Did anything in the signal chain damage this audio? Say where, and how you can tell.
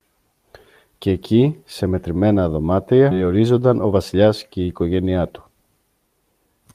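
Yes, the damage is in the network and jitter-buffer stage. Around 3.11 to 3.13 s there's a skip ahead: the speech jumps forward with no gap filled, losing roughly 0.4 s. A stretch of audio was dropped while later audio was already waiting, so playback could catch up.

Right after that, from 3.71 to 4.15 s, there's a jitter buffer speed-up. The speech runs about 7% fast at unchanged pitch and sounds slightly hurried. The buffer trimmed tiny pitch-period slices, a few tens of ms in total, to shed excess delay.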